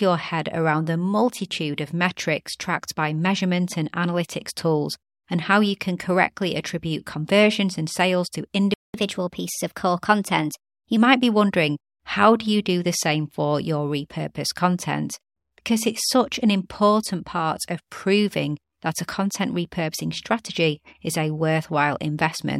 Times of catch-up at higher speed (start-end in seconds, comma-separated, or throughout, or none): 8.94-10.97